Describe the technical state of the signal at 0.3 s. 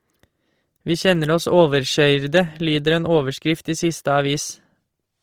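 At 0.3 s the speech carries plainly audible grainy, rough coding noise that persists throughout the clip, likely from Opus compression in its music-style mode. Band energies are preserved but starved of bits, so the fine detail is refilled with noise, which fits a rate near 24 kbps.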